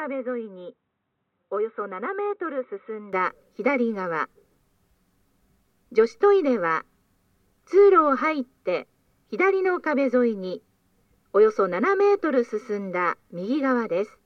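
From 0 to 3.13 s the sound is dull and roughly 10 dB quieter, with nothing above 3.9 kHz and faint added noise, likely an input switched to a poorer device.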